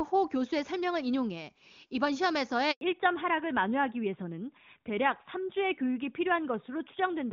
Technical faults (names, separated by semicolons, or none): handover gap; fallback to narrowband